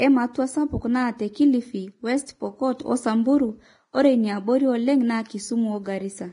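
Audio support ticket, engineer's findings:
Hissy, grainy treble throughout the speech. Consonants smeared, attacks blurred. Nothing above 10.6 kHz. Likely heavy Vorbis compression. Coarse treble quantisation turns fine detail into matching-energy noise. Damage points to a low bitrate, around 29 kbps.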